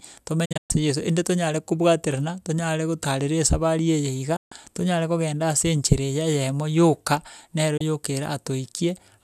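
The speech drops out three times, each a digital broadcast dropout where the receiver lost good frames and muted until they returned. From 0.45 to 0.71 s it's a stutter of short holes totalling about 190 ms, the longest 120 ms. At 4.36 to 4.52 s there's a single 144 ms gap, and at 7.77 to 7.81 s a brief 24 ms blip, which fits one lost frame. Each mute fades in roughly 8 ms, so the cuts are quick but not clicky, and whatever was sent during them is gone.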